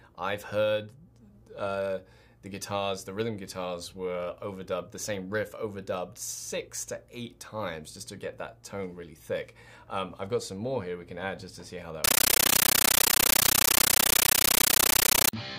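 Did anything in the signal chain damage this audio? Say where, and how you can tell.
Yes. At the playback link, an AC-3 bitstream was passed on as ordinary samples instead of being decoded: a compressed stream played as audio. From 12.04 to 15.33 s the sound becomes loud chattering static, 13.3 ms noise bursts repeating at 31.25 Hz, which fits 640 kbps AC-3 frames.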